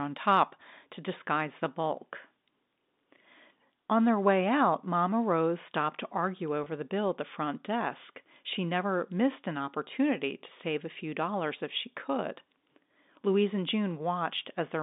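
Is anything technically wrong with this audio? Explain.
Yes. At 6.64 to 6.66 s, between "stopped to argue" and "the bill at the", there is packet loss with pitch repetition. About 20 ms of audio, likely two short packets, went missing. The receiver filled the gap by repeating the last pitch period of the speech, so the sound holds briefly with a slight buzz instead of dropping to silence as a plain dropout would. Around it, the G.711 telephone coding keeps the expected narrow 200 Hz to 3.7 kHz line band.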